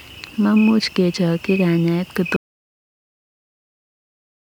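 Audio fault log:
2.36 s to the end, audio dropout to silence: the speech stops mid-flow and never returns, leaving dead silence with no room tone, likely from the input being lost while recording continued. The waveform flattens to a flat line; the spectrogram goes blank.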